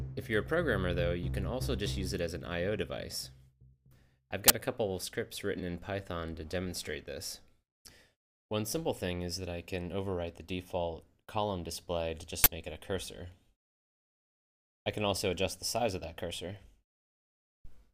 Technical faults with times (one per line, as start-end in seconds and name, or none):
4.48 uninitialised buffer
12.44-12.46 uninitialised buffer